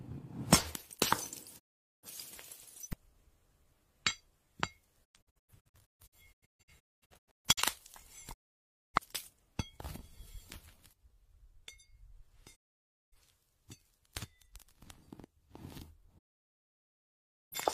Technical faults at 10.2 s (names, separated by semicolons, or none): none